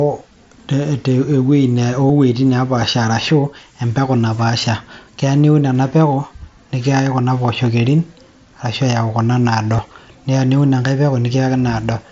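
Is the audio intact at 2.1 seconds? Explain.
No. At about 2.09 s there is concealed Bluetooth headset packet loss. About 15 ms of audio, which fits two lost packets, was filled by repeating the closest-matching stretch of recent waveform. Unlike a true dropout, there is no silent gap or click, just a brief buzzy tone held at full level, with a small warble where real audio returns.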